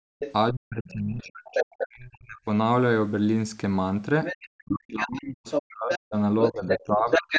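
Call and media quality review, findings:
Background gated by the echo canceller, 0.00–0.19 s: room tone drops hard right at the top, about 39 dB down, for roughly a fifth of a second. The canceller clamps the mic while the far end plays out of the loudspeaker, so the ambience vanishes and comes back once it releases.

Other side's voice leaking through, three spots. At 0.19–0.33 s it's faint, about 10 dB under the talker. At 1.54–1.63 s it's a quick scrap, about 5 dB under. From 4.24 s to the end it's roughly level with the talker. Likely residual echo: the canceller isn't fully subtracting loudspeaker pickup, so far-end audio rides along on the mic path. The last stretch is the worst, with no real margin between the two.

Speech suppressed in double talk, 0.51–2.48 s and 4.51–7.31 s: the near-end voice ducks and breaks up in chunks, with dips as deep as about 40 dB, adding up to a couple of seconds of loss in each stretch. 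Likely cause is the canceller failing to tell local speech from echo while both sides talk, so it squashes everything. The second stretch overlaps the level-matched leak above. Top end of the mic path reaches 8 kHz throughout.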